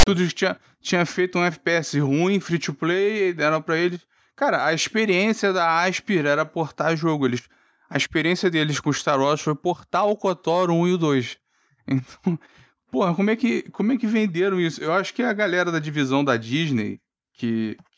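From 0 to 0.07 s the speech is preceded by file tags played as audio. A block of text metadata at the head of the file has been decoded as if it were samples, producing a loud, harsh rasp lopsided to one side of zero, followed by a short stretch of dead silence where the tag's zero padding was read. The hard edges and the rasp-then-silence shape set it apart from an ordinary click or a broadband white-noise burst.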